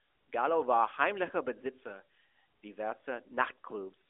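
No technical faults can be heard in this speech, which comes through the AMR narrowband mobile codec as that kind of phone line normally sounds.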